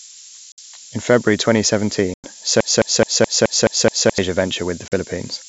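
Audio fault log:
throughout, low bit depth with noise shaping: The signal is carried on what sounds like only about 5 bits, with the rounding error pushed upward in frequency. The result is a steady, thin hiss, roughly as loud as the speech itself, climbing sharply toward the top of the band.
0.52–0.59 s, 2.14–2.29 s, 4.88–4.94 s, packet loss on an ADPCM call: A few packets at a time went missing and were filled with silence, leaving hard-edged holes of 60, 100 and 40 ms. The decoder's predictor and step size lose track, so the speech resumes slightly distorted before settling.
2.60–4.18 s, broken-record loop: A 213 ms fragment repeats exactly, back to back, seven times, most likely because the player or stream stalled and kept resending the last piece it held. The speech that belonged in those 1.6 seconds never plays.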